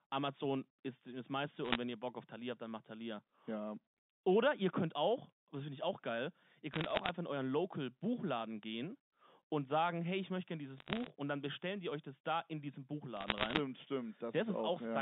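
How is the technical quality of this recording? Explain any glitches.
Crackle from bit errors on a digital phone line breaks up the speech four times: 1.64 to 1.76 s, 6.74 to 7.09 s, 10.77 to 11.10 s and 13.17 to 13.59 s. Under one bit in a hundred gets flipped. Each flip corrupts one sample. Flips on sign or high bits give sharp ticks over intact speech, all within the narrow G.711 telephone band.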